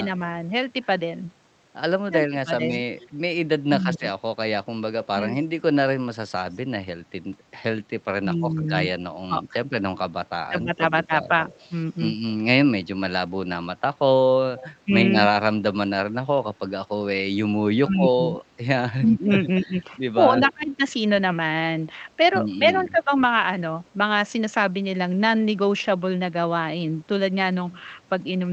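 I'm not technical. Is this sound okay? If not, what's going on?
No, not quite. From 2.07 to 5.19 s, 8.21 to 11.3 s and 14.85 to 23.12 s, the voice dips or cuts out in bits, likely speech suppressed in double talk, where the call system turns the speakerphone side's voice down when both sides talk at once. At 2.99 to 6.58 s, 11.48 to 14.69 s and 20.5 to 23.9 s you can hear a faint repeat of the voice about a quarter second behind, likely an echo leak from a speakerphone that wasn't fully cancelled.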